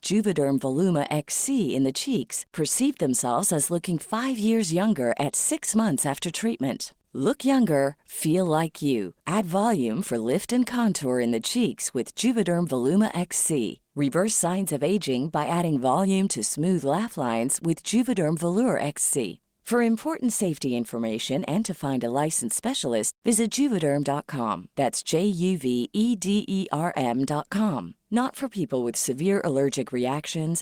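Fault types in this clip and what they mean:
No technical faults are audible anywhere in this speech recording.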